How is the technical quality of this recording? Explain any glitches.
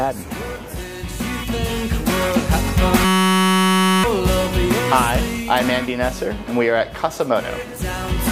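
The recording has one clear glitch, a system hang loop from 3.05 to 4.04 s. The machine stalled while the audio hardware kept replaying the same 5.33 ms slice of its ring buffer, which fits a 256-sample buffer. Repeated at about 188 Hz, that slice becomes a steady, pitched buzz rather than silence or a rhythmic stutter, which sets it apart from a dropout. About a second of real audio is lost.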